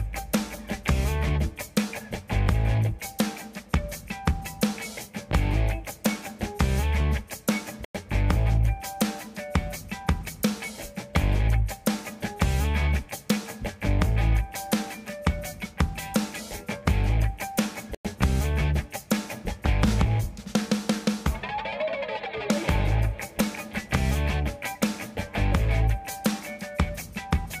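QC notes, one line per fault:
7.85–7.95 s and 17.95–18.05 s, gap between chunks: the sound stops dead for 100 ms, then resumes exactly where it left off, with nothing missing. The two holes fall about 10 s apart, which points to the audio being delivered in 10-second chunks with a stretch of silence inserted at each join, likely from codec padding or a player starting each chunk late.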